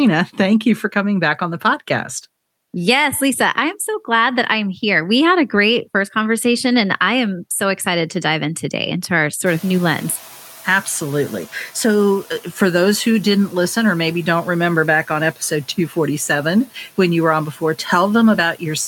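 Noise suppressor catching up, 9.46 to 12.11 s, after "in today into our": room noise jumps about 23 dB, leaks through, then sinks about 6 dB as the lagging noise estimate adapts.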